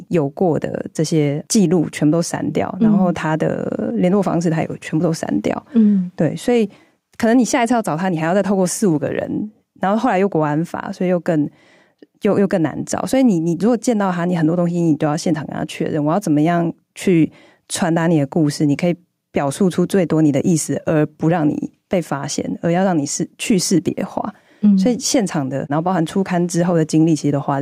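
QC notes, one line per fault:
throughout, gain pumping: the level ducks by about 5 dB under each loud syllable, squashing loud and soft parts together. This is likely input gain set too high and held back by a fast limiter. Unlike a noise gate, the gain is pulled down rather than cut to silence.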